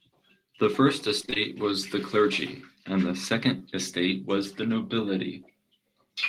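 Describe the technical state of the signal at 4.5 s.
At 4.5 s the audio is intact, with no audible fault in the signal at that point.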